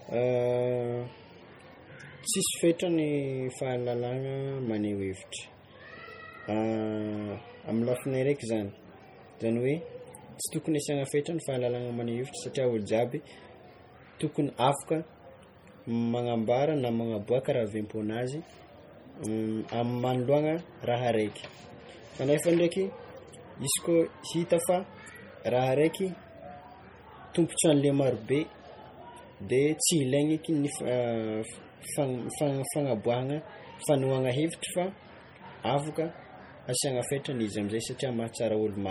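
MP3 compression runs through the whole recording, heavy throughout: the speech has a watery, swirling texture, s sounds chirp metallically, and consonant onsets smear. The cause is likely an encoder starving for bits, fitting a low rate near 32 kbps, dropping weak frequency lines frame by frame, with nothing above 20.9 kHz.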